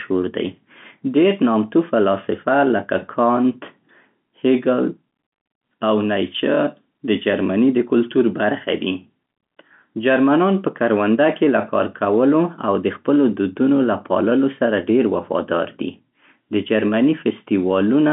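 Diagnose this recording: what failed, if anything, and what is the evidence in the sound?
Nothing in the chain has failed: the speech occupies the usual telephone band of about 150 Hz to 3.6 kHz with nothing above 3.8 kHz, which is what a working G.711 mu-law line at 64 kbps produces.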